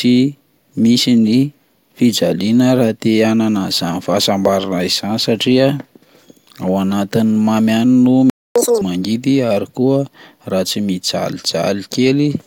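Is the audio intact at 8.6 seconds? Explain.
No. From 8.30 to 8.56 s the speech cuts out into silence for about 0.26 s, then resumes where it stopped. This is a playback stall, most likely the player running short of data or its output thread being held up until it recovered.

Straight after, from 8.56 to 8.81 s, the speech plays at twice normal speed and sounds chipmunk-like, nearly an octave higher, before dropping back to normal. This is catch-up at higher speed: the player resamples its backlog faster to recover the lost time.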